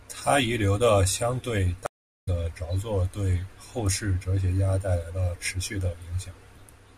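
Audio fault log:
1.86–2.28 s, stream reconnect: right after "留的相对" the speech drops into about 0.41 s of dead silence, then picks up again at "着作对后". The connection broke and the player re-established it and spun up a fresh decoder mid-stream. It rejoined where the stream had moved on to, not where it left off, so the speech jumps ahead by roughly 0.4 s. The missing stretch is skipped over entirely.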